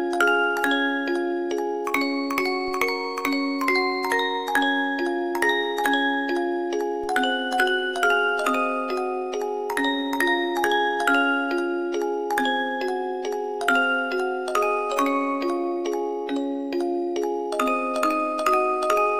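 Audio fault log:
2.68 s and 7.04 s, DC step: at each of these instants the waveform's zero line jumps suddenly by about -33 dBFS and then slides back toward centre, as a high-pass around 5 Hz pulls the offset away over a few tens of milliseconds. That abrupt shift in the baseline, followed by its slow return, is what comes through as a low thump or click at each time, while the sound itself carries on unchanged.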